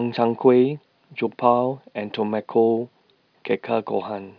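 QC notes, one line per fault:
No audible faults detected.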